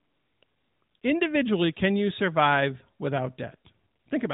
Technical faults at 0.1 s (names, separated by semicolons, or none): none